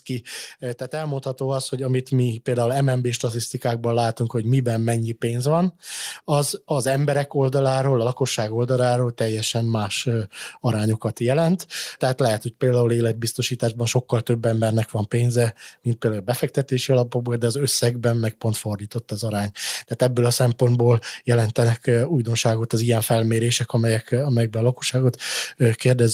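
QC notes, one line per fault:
0.9–5.33 s, automatic gain rising: the level creeps up by about 6 dB over roughly four and a half seconds, and the background swells right along with the voice, so it's the AGC deciding the input was too quiet and slowly cranking its gain, settling just before "van az az emberek".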